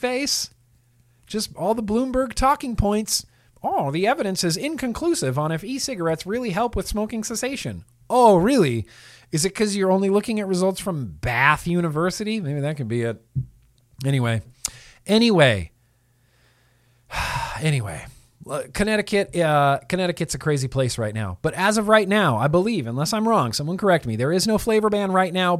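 Nothing technical stands out in this speech recording; it's a straightforward listen with no faults to point to.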